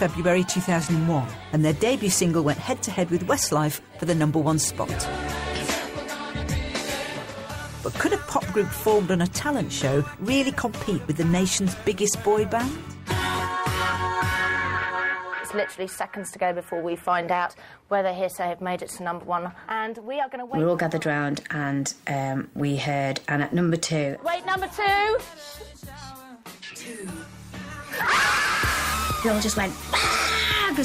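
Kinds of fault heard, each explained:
No faults can be heard anywhere in the audio, and the signal holds steady throughout without any dropout, distortion or interruption.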